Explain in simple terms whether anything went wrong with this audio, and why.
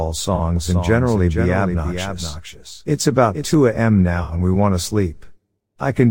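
AAC frame loss with concealment occurs twice, first from 0.35 to 0.41 s and again from 4.23 to 4.33 s, just before "and we want to". In both spots, short chunks of the compressed stream went missing, roughly two and three frames' worth. The decoder patched each gap by reusing and roughly reshaping the last good sound, so those moments come out smeared and noisy, lasting about 40 and 60 milliseconds.

A doubled audio track runs from 0.56 to 3.54 s. A second, somewhat quieter copy of the same sound plays about half a second behind the original, like a flat, dry echo with no room sound to it. It starts and stops abruptly. The likely cause is the same sound being picked up a second time through a slower route, or an edit that left two out-of-step copies layered together.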